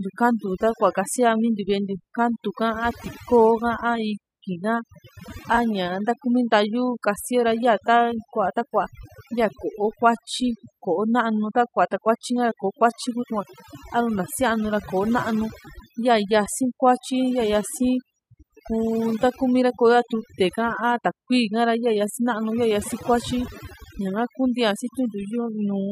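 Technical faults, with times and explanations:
Throughout: overdone noise removal. Heavy gating mutes bands near the noise floor, leaving near-silent gaps with twinkling specks and quiet parts of the speech removed; the spectrogram shows patchy, holed-out bins.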